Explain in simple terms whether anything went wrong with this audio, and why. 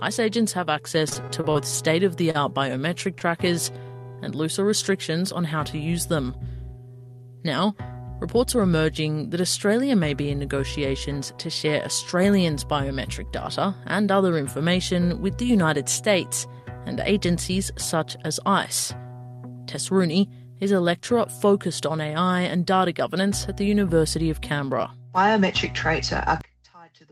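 A few things go wrong here, mostly bunched into the first few seconds, plus one at the very end.

From 1.09 to 1.57 s you get repeated packet loss, the robotic-sound kind. Six separate little holes open up in that half second, the longest about 26 ms. Each time, the receiver papers over the hole by carrying the last bit of sound forward. About a quarter of that stretch is patch rather than real audio, and roughly 80 ms of the original never arrives. That's why it sounds choppy and a bit mechanical there.

At 2.31 s there's a short stall from a late packet. This time nothing is actually lost. A packet simply shows up late, so the receiver holds the current sound for about 37 ms while it waits, then carries on from exactly where it left off. What you hear is a sound that lingers a touch too long, maybe with a faint buzz, rather than a gap.

Around 3.2 s, from 3.18 to 3.22, there's a short concealed packet loss. 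A 20 ms slice goes missing outright, and the receiver fills it by extending what came just before, then blends back into the real audio. It's over so fast you'd probably catch it only as a tiny smear.

The last one starts at 26.41 s and runs to the end. The sound suddenly drops almost to nothing, leaving only a faint remnant. The likely cause is one channel inverted. If one side of a stereo signal has its polarity flipped, everything the two sides share cancels out when they're combined into one channel. All that survives is whatever differs between them, which is why it nearly disappears.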